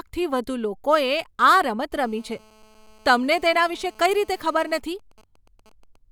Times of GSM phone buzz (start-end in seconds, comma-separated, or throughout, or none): 1.92-4.79